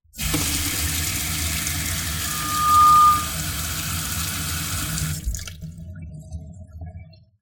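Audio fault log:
2.26–3.37 s, loudspeaker feedback squeal: a 1.2 kHz tone swells over roughly half a second, about 15 dB above the sound, as the mic-speaker loop exceeds unity gain.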